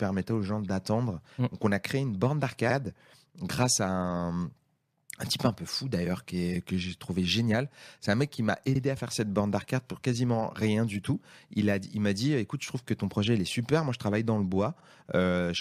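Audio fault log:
8.75–8.81 s and 14.80–14.86 s: overlapping chunks, 6-second blocks restarting 50 ms early, so a repeated slice stutters; waveform shows a duplicated segment with a seam.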